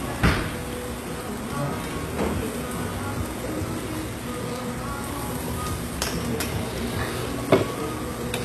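HE-AAC compression runs through the whole clip: the treble is likely rebuilt by band replication from copied lower bands, so it sounds gritty and metallic, with nothing above 12.3 kHz. The plainly audible damage fits a bitrate near 16 kbps.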